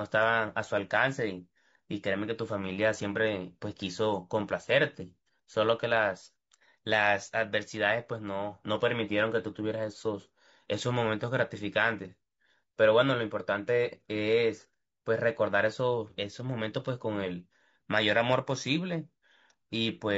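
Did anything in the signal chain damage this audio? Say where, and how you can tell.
Yes. The damage sits at the codec stage and runs throughout: the speech sounds rough and grainy, with noise filling the gaps between harmonics. That points to low-delay AAC compression, likely AAC-ELD at around 32 kbps, whose short frames resolve pitch harmonics poorly.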